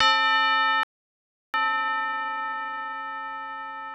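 At 0.83 s the sound stops dead for about 0.71 s, resuming at 1.54 s. This playback stall was likely the player running out of data. From 1.54 to 2.94 s, time-compressed catch-up follows. The audio runs 1.5 times fast at normal pitch, as small pieces are cut out to clear the backlog.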